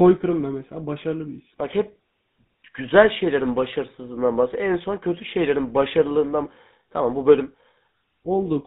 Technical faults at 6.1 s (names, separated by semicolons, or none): GSM full-rate codec